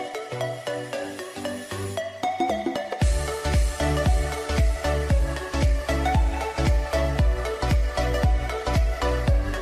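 No technical faults can be heard anywhere in the recording. Nothing in the audio points to a problem in how it was captured, processed or delivered.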